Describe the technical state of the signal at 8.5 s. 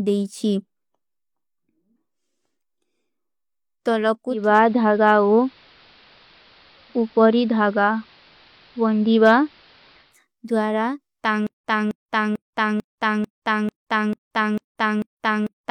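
At 8.5 s the speech is in the middle of a digital radio blending to analogue episode lasting from 4.27 to 10.21 s. The receiver lost its digital stream and cross-faded over 279 ms to the station's AM broadcast, so the top end is cut back and a hiss sits roughly 30 dB under the speech. On a spectrogram, the high-frequency energy thins out over a lifted noise floor; the waveform's level shifts by about 3 dB.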